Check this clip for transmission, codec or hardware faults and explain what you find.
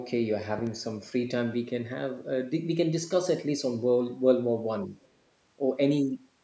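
Three faults are audible in this speech clip: a double pop near the start, a brief dip in the talker's level, and a faint scrap of a second voice just after it.

Loud pop, 0.59 to 0.69 s. Two sharp pops arrive in quick succession, peaking a little above the speech. The speech carries on underneath them. The likely cause is a sudden voltage step, such as a plug, a switch, static discharge or a driver glitch, that got added to the signal. The circuits after that point shaped it into a short pulse, and the ear hears that pulse as a crisp double click.

Speech suppressed in double talk, 4.85 to 4.92 s. For about 70 ms the talker's level sinks slightly. It is a shallow dip, not a dropout. The likely cause is an echo canceller that briefly faced both sides talking at once. It could not tell its own talker from the loudspeaker echo, so it turned the microphone signal down. The result is a quick, soft duck in the speech.

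Other side's voice leaking through, 5.02 to 5.08 s. A tiny fragment of a second voice appears here, lasting about 60 ms. It sits very far below the speech and is barely audible. The likely cause is the other party's audio playing from the talker's loudspeaker and reaching the microphone. The echo canceller did not remove all of it, so a residue slipped through.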